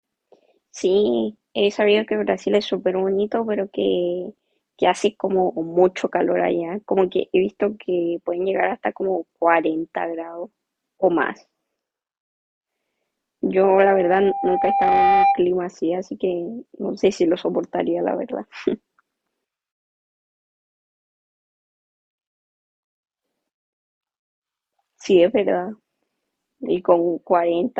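A speech recording with loudspeaker feedback squeal from 13.64 to 15.47 s: a 794 Hz tone swells over roughly a second and a half to about 5 dB above the speech. The spectrogram shows a single bright horizontal line thickening, and the waveform envelope swells steadily.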